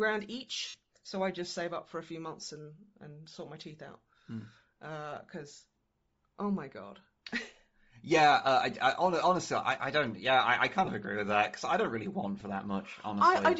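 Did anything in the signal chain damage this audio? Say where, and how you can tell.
Yes. Throughout the speech there is a breathy, grainy edge, and the upper spectrum is thinned and partly replaced by noise. That is likely Bluetooth LC3 compression at the codec stage, with damage plainly audible, and the graininess points to a low rate around 32 kbps with short 7.5 ms frames. On a spectrogram the high band looks speckled and patchy rather than showing clean harmonics. The waveform shows no breaks from this.

Lost LE Audio frames at the network/radio stage cause short dropouts where the decoder repeats the last spectrum with scrambled phase. The longest is at 0.68–0.75 s, about 60 ms, which fits a run of 7.5 ms frames. Brief ones fall at 5.97 s, at 10.85–10.88 s between "I I" and "of agree with that", and at 12.40 s after "I don't really want". Each shows as a smeared noisy block with harmonics lost, fading in level across the longest gap.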